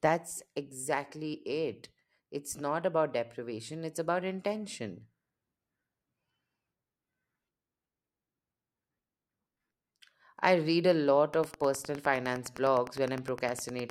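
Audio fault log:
11.27–13.91 s Wi-Fi interference: rectified radio beacons every 102.4 ms tick about ten times a second, roughly 20 dB under the speech, far slower than GSM buzz.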